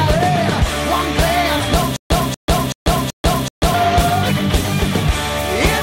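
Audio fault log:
1.96–3.74 s, stutter with silent gaps: the same 0.24 s burst plays four times at an even 0.38 s pace, separated by 0.14 s of dead silence, and the audio due in that span is lost. This is likely a stalled stream replaying its last fragment at each retry.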